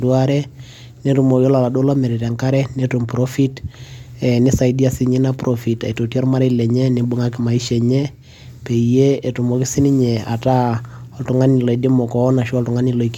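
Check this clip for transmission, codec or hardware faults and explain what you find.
There is one hardware fault, sample clock jitter, present throughout the speech. The converter's clock wanders by roughly 2 microseconds, so samples land slightly off time. The error tracks the waveform's slope and sits about 40 dB below the signal, as a roughness on loud, bright sounds. Unlike a steady noise floor, it vanishes in the pauses.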